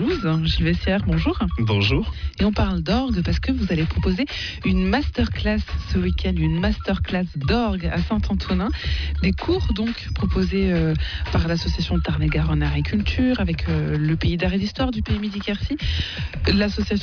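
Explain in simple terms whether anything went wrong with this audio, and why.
Nothing went wrong here; I listened all the way and didn't hear anything out of place.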